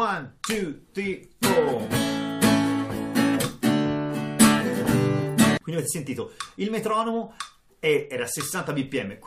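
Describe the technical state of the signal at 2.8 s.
The signal at 2.8 s is intact, with no technical fault present at that moment.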